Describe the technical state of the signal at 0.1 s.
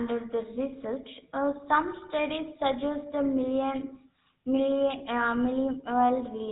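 At 0.1 s the speech is passing through a GSM full-rate codec, present for the whole clip. It rebuilds the voice from a vocal-tract model driven by sparse, regularly spaced pulses, consistent with roughly 13 kbps, dropping everything above 4 kHz. The result is a plainly audible buzzy, gravelly roughness.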